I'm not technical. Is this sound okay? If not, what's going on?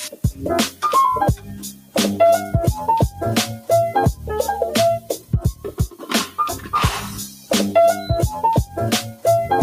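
No. A noise suppressor applied to music or sounds was left running throughout. Built for speech, it mistakes steady tones and lingering tails for background noise, so held sounds keep sinking while sharp hits survive. Unlike a dropout, nothing goes fully silent. It pumps up and down instead.

The clearest moments of sound cut by the noise suppressor come at 0.11 to 0.41 s, 1.36 to 1.95 s, 5.0 to 5.33 s, 5.54 to 6.05 s and 7.28 to 7.51 s. Each time, a sustained or fading part briefly ducks noticeably quieter and then recovers, rather than breaking up or crackling.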